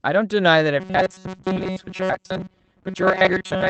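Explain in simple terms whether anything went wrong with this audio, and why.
From 0.8 s to the end, the speech turns into a stiff, metallic buzz at about 188 Hz. This is robotic sound from repeated short buffers: audio likely arrived too slowly, so the software kept replaying tiny slices of about 5 ms, repeating most of the sound.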